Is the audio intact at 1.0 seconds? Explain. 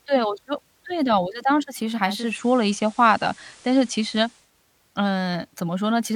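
Yes, the audio is intact at 1.0 seconds, with no fault audible at that point in the speech.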